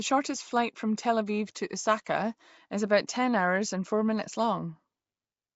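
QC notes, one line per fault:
Throughout: Nellymoser compression, the old Flash microphone codec, likely at work here. The damage is plainly audible. The speech carries a rough, hissy halo and sounds smeared, a bit underwater. That comes from coding short blocks at a fixed two bits per sample, which fits a rate of around 32 kbps. Quieter bands get no bits and are filled in with noise, and nothing survives above about 7.7 kHz.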